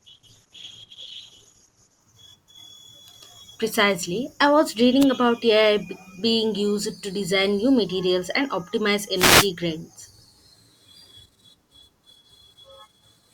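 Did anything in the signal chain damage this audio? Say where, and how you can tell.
Yes. Adaptive stream starting at a low bitrate, 0.0 to 2.0 s, at the codec and network stage: the speech has nothing above 12.1 kHz and heavier coding artefacts, then sharpens abruptly with no gap. That fits a 16 kbit/s Opus stream stepping up to about 64 kbit/s.

Wireless microphone noise hits at 5.00 to 5.05 s and 9.15 to 9.49 s, in the analogue radio link: short bursts of static swish over the speech. Reflections cancelled the FM signal, so receiver noise rose.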